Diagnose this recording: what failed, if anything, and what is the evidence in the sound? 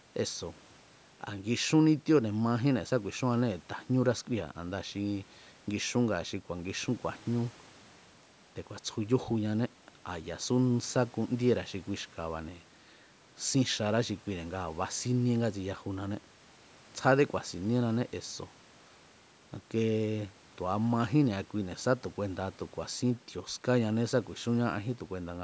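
Nothing stood out on listening to this speech recording; the band stops at 8 kHz and the lowest bass is trimmed, as expected from a call's normal microphone processing.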